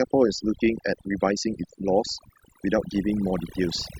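From start to finish there's overdone noise removal: the reduction was set too aggressively, so the gaps sink to near silence with twinkly specks and quiet parts of the speech go with them.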